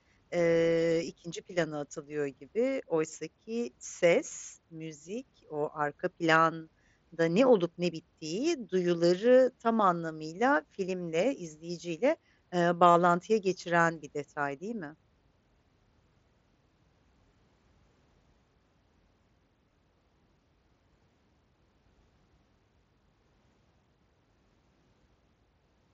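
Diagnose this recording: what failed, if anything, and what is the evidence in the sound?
Concealed Bluetooth headset packet loss on the wireless link: lost packets were filled with repeated waveform, nearly hidden at 3.15, 4.3 and 19.7 s, buzzy for 38 ms at 12.91 s.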